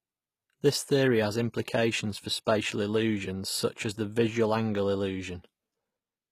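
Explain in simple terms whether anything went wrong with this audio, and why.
HE-AAC compression, throughout the whole clip: the speech has the gritty, metallic treble that likely comes from this kind of squeezed-down streaming format. It stores only the lower, fuller part of the sound properly and then fakes the upper part by copying lower sound upward and roughly reshaping it. That keeps things bright, but the rebuilt treble doesn't match the real one, so s sounds come out rough or lispy, and nothing at all is left above about 15 kHz.

Pre-echo, from 2.45 to 2.47 seconds, between "theory has implications for" and "illusions such as the": a short hiss of about 21 ms creeps in just before a sharp sound starts. The format handles audio in short chunks and spreads its noise evenly across each one. Here a sudden attack came late in a chunk, so noise meant to hide under the loud part leaked into the quiet moment before it, softening the attack.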